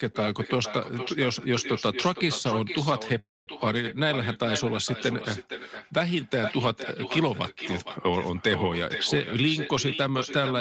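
A speech recording carried over a call, with nothing above 8 kHz, which fits a wideband Opus stream. Echo with no canceller runs through the whole clip. Every phrase returns about half a second later. The copy sits about 10 dB below the speech. It sounds thinner, like audio bounced off a distant loudspeaker into an open microphone. Nothing at the far end removes it, so the talker is shadowed by their own delayed voice from start to finish. At 3.19 s a call audio freeze begins and lasts until 3.49 s. The last sound is stretched into a brief fading buzz, then about 210 ms of silence. In all, roughly 280 ms of filler is inserted. No speech is lost. The audio resumes where it stopped, just that much later. The likely cause is held-up packets draining the jitter buffer. From 9.35 s to 10.59 s a jitter buffer speed-up occurs. The receiver had built up extra delay. It trims tiny pitch-period slices over and over, about 50 ms in total. 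Playback runs at about 104 percent. Pitch is unchanged.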